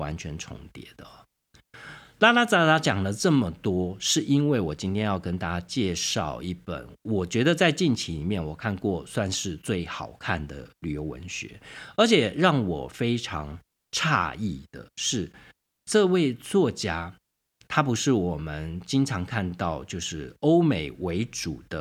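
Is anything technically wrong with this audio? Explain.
No, nothing in this speech recording points to a technical fault.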